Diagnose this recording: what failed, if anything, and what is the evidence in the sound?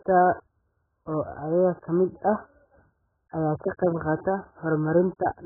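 The failure is at the codec stage: heavy AAC compression throughout the speech, likely from AAC-LC at a starved bitrate. The spectrum stops dead at about 1.7 kHz, which fits an encoder squeezed to roughly 8 kbps and forced to drop its cut-off and quantise the remaining bands coarsely. The smeared, dull texture separates this from a clean low-pass or telephone band limit, which would narrow the sound without this level of codec damage.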